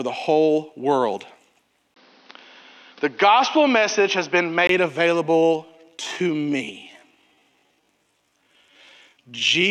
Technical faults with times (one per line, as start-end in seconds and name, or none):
1.94-4.69 input switched to a poorer device
5.27-9.70 time-stretched section